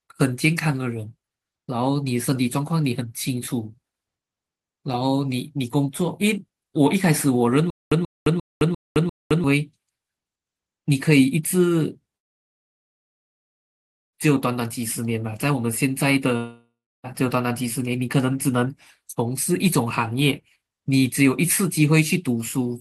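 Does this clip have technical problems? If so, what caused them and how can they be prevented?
Yes. A stutter with silent gaps runs from 7.70 to 9.44 s. A 135 ms fragment of speech repeats five times, each followed by 213 ms of digital silence, for a steady 348 ms cycle. The player likely stalled, replaying its last buffer at each retry while the speech meant for that time was lost. Larger playback buffers and stable delivery prevent this.

Long network dropouts occur from 12.17 to 14.15 s (about 1.96 s missing, almost all of it silent) and from 16.37 to 17.06 s (0.68 s missing). In the second, the receiver briefly extends the last sound before 320 ms of silence. Speech resumes without the lost audio, likely from packets that never arrived. A more reliable connection with jitter buffering and packet-loss recovery prevents this.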